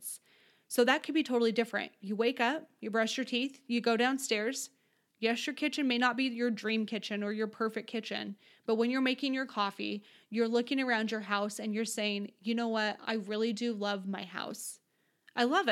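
No technical faults can be heard anywhere in the recording.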